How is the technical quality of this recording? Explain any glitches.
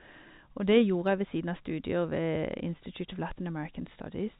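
Nothing stood out on listening to this speech recording, which carries the narrow band of ordinary G.711 telephone coding, with nothing above 4 kHz.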